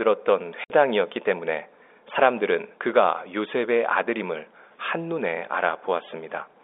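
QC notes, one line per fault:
0.64–0.70 s, packet loss filled with silence: a 60 ms dead gap with hard edges, likely three 20 ms packets lost, with no smeared concealment.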